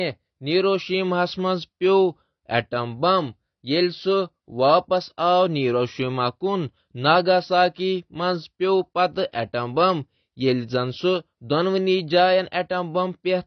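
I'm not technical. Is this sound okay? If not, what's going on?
No. The whole recording sounds dull and muffled, as if heard through a thin wall, because nothing above about 6 kHz survives. The crisp edges of consonants like s and t lose their sparkle, and the voice has a plainly smeared, watery quality. This is likely AAC compression squeezed too hard: to save space, the encoder discarded the high frequencies and stored the rest only roughly, and that roughness can be heard.

At about 9.32 s there is pre-echo: a short hiss arrives just before a sudden, sharp sound, and the sound itself lands softly instead of crisply. The compression works on short chunks of audio at a time and spreads its error evenly across each chunk, so the noise belonging to the loud moment leaks into the quiet instant just before it.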